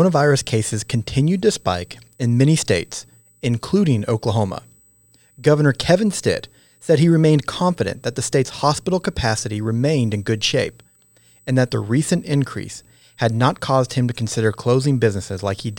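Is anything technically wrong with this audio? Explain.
Yes. A USB whine runs through the whole speech clip as a steady, fixed-pitch tone at 8 kHz, roughly 40 dB below the speech. It comes from USB microframe current pulses every 125 microseconds leaking into the ground or supply. On a spectrogram it shows as a thin unbroken horizontal line at 8 kHz.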